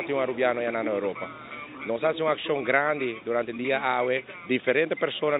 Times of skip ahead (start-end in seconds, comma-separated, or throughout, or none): none